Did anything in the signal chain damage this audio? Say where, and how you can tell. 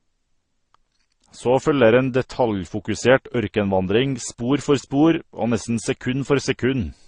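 Yes. The damage is at the codec stage and runs through the whole speech clip. Nothing reaches above about 9.7 kHz, so the top octave is gone. Two different kinds of coding artefact are heard together. This points to transcoding between lossy codecs, likely a low-rate MP3 pass near 35 kbit/s followed by Opus near 32 kbit/s. The second encoder spends bits re-coding the first one's artefacts and adds its own. The lower cut-off survives.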